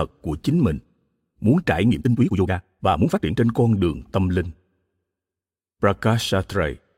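From 1.86 to 3.38 s, right after "muốn trải", there's a time-stretched section played at 2x speed with pitch unchanged. It sounds rushed until "con đường tâm", likely from software dropping short chunks to fit a length.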